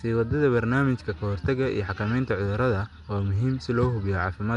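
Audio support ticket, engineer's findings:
Rough, hissy halo over the speech throughout, with a smeared, underwater blur. Codec damage plainly audible. Nothing above 10.6 kHz. Likely Nellymoser compression (Nellymoser Asao, Flash's microphone codec). Fixed bit budget per block leaves weak bands with no bits. The decoder fills them with noise, causing the hiss. Band limit and density fit a stream of about 44 kbps.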